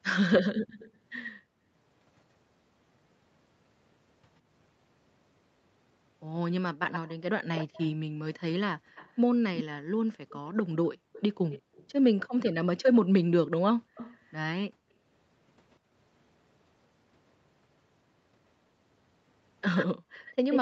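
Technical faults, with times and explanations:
0.67–1.31 s, 6.91–15.76 s and 19.75 s to the end: echo leak. A delayed, fainter copy of the speech follows it, about 123, 195 and 129 ms late, at about 15, 15 and 5 dB below. This is likely the far end's echo canceller letting its loudspeaker pickup through.
0.66–1.69 s, 8.09–8.95 s, 10.97–11.74 s, 13.82–15.91 s and 19.97–20.15 s: background gated by the echo canceller. The room sound drops out briefly, by up to about 40 dB, for a fraction of a second each time. The canceller clamps the microphone while the loudspeaker plays, then releases.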